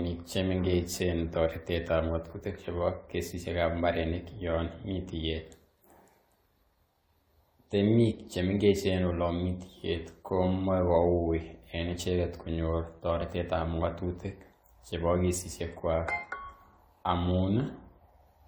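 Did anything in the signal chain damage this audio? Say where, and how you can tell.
Yes, at the codec stage: generation loss runs the whole clip. The speech sounds swirly, smeared and hollow with blurred attacks, though the band reaches 20 kHz. That points to likely repeated AAC re-encoding, maybe seven passes at around 96 kbit/s, with errors piling up each time.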